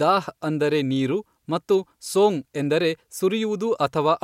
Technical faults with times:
none

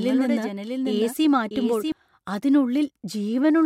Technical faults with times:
0.00-1.92 doubled audio track

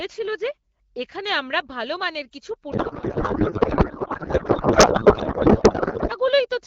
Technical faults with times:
2.71-6.13 codec payload misread

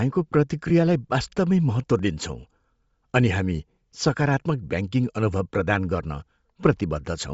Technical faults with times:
0.00-7.33 Bluetooth LC3 compression
0.69 lost LE Audio frames
4.72 lost LE Audio frames

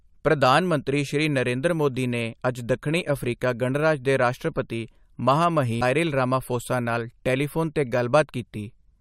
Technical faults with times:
5.81 damaged data in a compressed stream

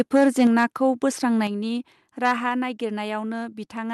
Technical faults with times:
0.00-0.63 microphone overload
0.47 microphone volume stepped down
1.47 microphone volume stepped down
2.25-2.32 microphone overload

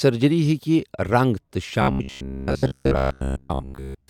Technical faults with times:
1.82-4.09 robotic sound from repeated short buffers

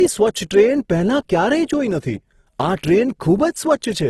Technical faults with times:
0.00-4.10 low-bitrate audio saved at a high bitrate

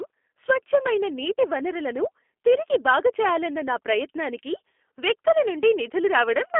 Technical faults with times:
0.00-6.59 G.729 codec

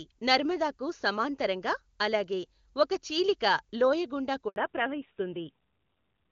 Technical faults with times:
4.48-4.56 handover gap
4.56-6.31 fallback to narrowband

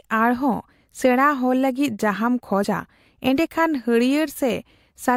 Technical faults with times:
2.64 compressed frames skipped

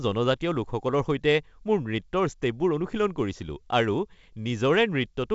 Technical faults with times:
none

